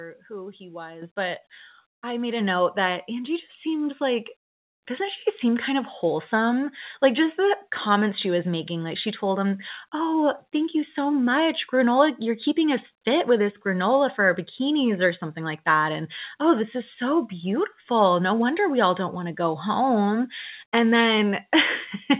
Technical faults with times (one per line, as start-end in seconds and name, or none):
1.02 microphone volume stepped up
2.40 microphone volume stepped up
3.42 microphone volume stepped up